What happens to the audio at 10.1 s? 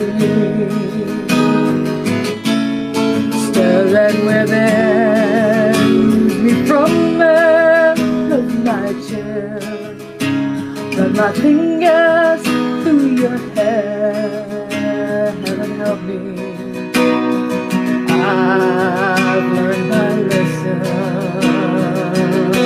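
At 10.1 s the audio has gain pumping, as it does through the whole clip. The level swings by roughly 5 dB. Loud and soft passages sit close together, so the sound feels squashed. The likely cause is input gain set far too high, with a fast limiter or compressor clamping down on every peak and then releasing.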